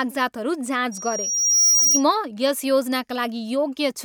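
From 0.91 s to 2.03 s a piercing 5.7 kHz tone swells over roughly a second until it sits a little above the speech: loudspeaker feedback squeal. The microphone is picking up its own loudspeaker, and at that frequency the loop gain exceeds one.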